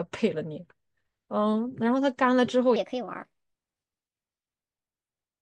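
A speech recording with a section at the wrong speed. From 2.76 s to the end, the audio runs 1.27 times too fast. Pitch rises with it, about four semitones, so the voice turns high and hurried. Playback against a mismatched clock is the likely cause.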